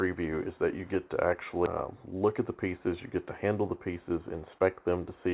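Audio heard through a narrowband call path, with nothing above 4 kHz, which fits a G.711 mu-law codec at 64 kbps, carries two timing faults. At 1.66 s there is a skip ahead. Roughly 0.7 s of audio is discarded, likely by an overflowing jitter buffer, and playback joins the two sides almost directly with no filled gap, so the sound lurches forward abruptly. From 2.65 s to 5.28 s a jitter buffer speed-up follows. The receiver trims excess buffered delay by repeatedly cutting out short pitch-period segments, totalling about 150 ms. The audio runs at 105% speed without a pitch change and sounds slightly hurried.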